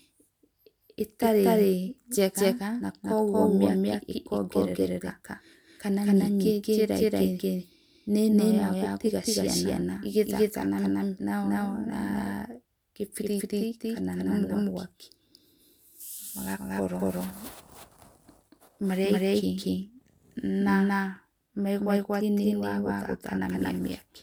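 From start to end, the speech carries a doubled audio track: an equally loud, dry copy trails by around 200 ms, likely from a second capture path.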